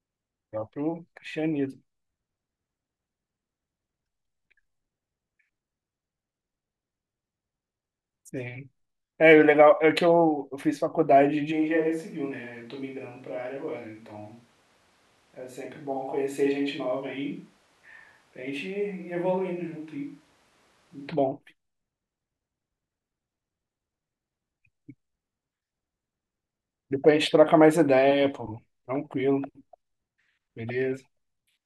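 From 11.53 s to 21.07 s the speech takes on the sound of a switch to a distant microphone. The tone turns abruptly roomy and hollow, bass thins, the level falls by about 10 dB, and room noise rises to about 35 dB below the speech. The likely cause is that the close microphone's feed dropped out and a farther pickup, such as a camera microphone, filled in. The return at 21.07 s is equally sudden.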